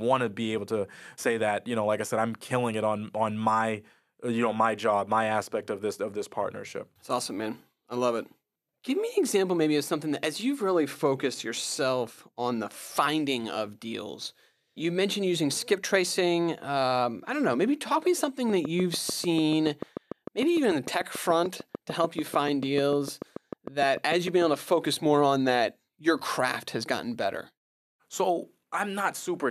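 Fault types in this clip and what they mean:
Train of clicks: from 18.50 to 24.43 s, after "talk me" and up to "able to focus more", around forty same-shaped clicks tick at a regular 6.75 per second over the speech and its pauses, roughly 10 dB above it. A waveform shows evenly spaced narrow spikes; a spectrogram shows a row of thin vertical lines spanning the frequency range. The likely source is interference from nearby equipment, a faulty connection or a power supply fault.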